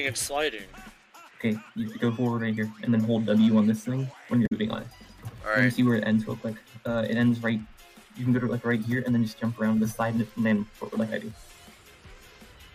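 At 4.43 s the audio breaks into a short blip lasting until 4.53 s. This is damaged data in a compressed stream. Corrupted bytes there made the decoder misread its frames and lose sync. It then hunted for the next valid frame header.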